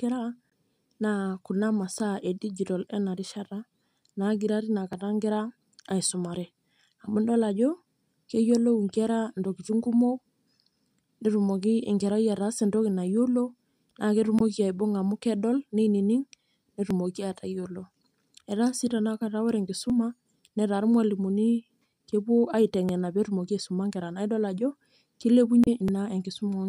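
At 0.49 to 0.53 s a brief glitch cuts through the speech. This is damaged data in a compressed stream: corrupted bytes make the decoder misread those frames, lose sync and jump to the next frame header it can find. The same glitch returns at 14.37 to 14.43 s and again at 25.64 to 25.69 s, each lasting around 40 to 50 ms.

Separately, tiny skips occur at 1.94 s, just before "edijitol enarishata", then at 4.93 s, at 13.91 s right after "ataasa entoki nayiolo", and at 16.91 s, 19.90 s after "si tanakata ore", 22.89 s and 25.88 s. Each drops only a few milliseconds, and their 3-second spacing points to audio missing between chunks, likely because a recorder working in 3-second blocks loses a sliver at every handover and butts the edges together.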